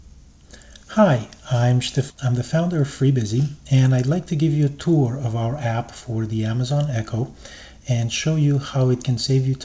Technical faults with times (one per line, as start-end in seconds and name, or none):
2.10-2.12 skip ahead
2.67-3.11 jitter buffer speed-up